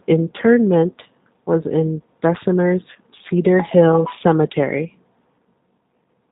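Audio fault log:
Throughout: G.729 codec. The speech sounds band-limited and slightly rough and synthetic, which points to an 8 kbit/s codec that rebuilds each 10 ms frame from a vocal tract filter, a pitch predictor and a few pulses, passing nothing above 4 kHz.
2.93 to 2.97 s: VoIP packet loss concealed by the speech codec. About 20 ms of audio is missing, which fits one lost packet. The decoder continued its last pitch and filter at falling gain, producing a brief stretched, fading sound, and the voice stays weak or distorted for tens of milliseconds or more after about 2.97 s.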